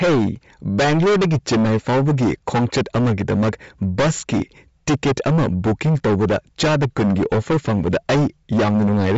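From start to finish the speech carries a harsh, constant fuzz: hard clipping, with the signal driven about 23 dB past full scale so roughly a third of samples are flattened. Throughout, it also sounds breathy and grainy with nothing above 7.7 kHz, likely from Bluetooth LC3 compression at a rate that fits about 32 kbps with 10 ms frames.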